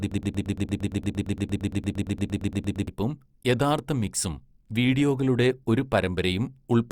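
A stalled stream likely kept resending one fragment: a broken-record loop, already running at the start, repeats 115 ms of speech until 2.88 s.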